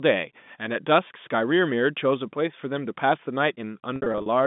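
At 1.08 s the speech holds on a buzzy tone for 20 ms. From 3.96 to 4.26 s it stutters, losing 160 ms in gaps up to 60 ms that fade toward silence. This is packet loss with pitch repetition, where the receiver replays the last pitch period across missing packets.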